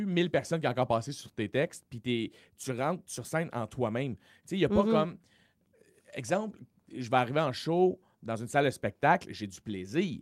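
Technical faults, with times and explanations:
Throughout: clock drift between sender and receiver, the sender running roughly 4 percent fast and overfilling the buffer; unlike random jitter, the error always leans one way.
0.15–10.11 s: repeated timing corrections, tiny unevenly spaced cuts holding the audio at 104 percent speed, heard as faint hiccups and unsteady tempo, not packet-loss gaps.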